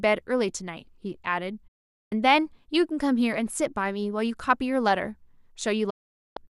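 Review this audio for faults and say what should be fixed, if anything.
Digital broadcast dropouts cut the speech at 1.67–2.12 s and 5.90–6.37 s. Each time the receiver muted through an 8 ms fade, discarding roughly half a second of audio. Waveform and spectrogram show flat, empty gaps with sharp edges. Improving reception or adding error-correction margin prevents this.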